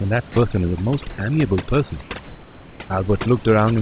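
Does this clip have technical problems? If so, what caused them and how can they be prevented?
Yes. Three kinds of fault can be heard.

Overdone noise removal runs through the whole clip. The noise reduction was set too aggressively, so individual frequency bands near the estimated noise floor are pulled down or removed entirely, along with the quieter parts of the voice. The room noise, which sits about 25 dB below the speech, is reduced to near silence with twinkling specks. On a spectrogram the background appears as scattered isolated dots rather than a continuous haze, and the speech harmonics show gaps and ragged edges. Everything stops at 4 kHz because of the G.711 call path. To prevent this, lower the reduction strength or use a gentler noise-reduction setting on noisy recordings.

Sound dropped by the voice detector occurs from 0.32 to 0.36 s, where 40 ms of the voice is replaced by steady noise. 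The likely cause is the sender's voice activity detector mistaking part of the speech for background and stopping transmission, while the receiver fills the gap with comfort noise. On a waveform the speech envelope suddenly collapses to a flat, low band of noise, and on a spectrogram the harmonics break off and are replaced by a smooth, uniform smear. To prevent this, make the voice detector less aggressive or add hangover time so that soft speech keeps being sent.

Comfort noise in place of the background appears from 1.1 to 1.18 s and from 2.02 to 2.1 s, 80 ms each. The likely cause is discontinuous transmission: the sender pauses during non-speech, and the receiver generates synthetic noise roughly shaped like the background. That background sits about 26 dB and about 25 dB below the loud parts. The fill is about 4 dB louder in the first gap and about 1 dB quieter in the second. On a spectrogram these stretches look featureless and evenly textured, and the waveform shows a small step in the noise level at each edge. 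To prevent this, disable discontinuous transmission or improve how closely the comfort noise is matched to the real background.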